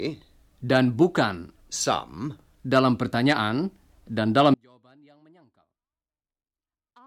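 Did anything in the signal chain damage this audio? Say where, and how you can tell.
Yes. At 4.54 s the speech cuts out abruptly and never returns, running to the end of the clip. What's left isn't silence but a faint leak of the signal, roughly 35 dB below its normal level. That's an audio dropout to a faint residue: the wanted signal was lost upstream while everything after the break stayed live. The likely culprit is a failing connection in the analogue wiring, not a pause or fade in the speech itself.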